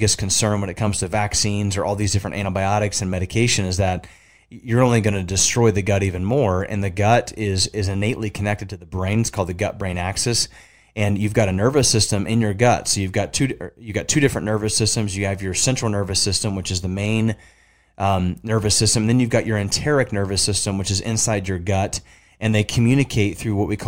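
No technical faults can be heard anywhere in this speech recording; the signal stays continuous and steady throughout.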